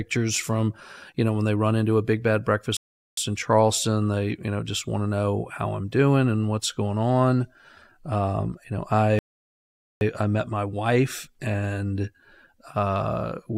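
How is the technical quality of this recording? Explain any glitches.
The speech is interrupted twice by playback stalls. A rebuffering stall occurs at 2.77 to 3.18 s and again at 9.19 to 10.01 s. The player ran out of downloaded audio and halted until more arrived, so the sound drops to silence, about 0.41 s and then 0.82 s, and picks up exactly where it stopped, adding time without losing any speech.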